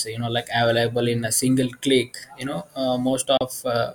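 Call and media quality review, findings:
Digital broadcast dropout at 3.37–3.41 s in the speech. Audio fades out within 3 ms, silent for 32 ms, then resumes later in the programme. Probable component: receiver muting on a failed frame checksum. The gap fits one lost frame.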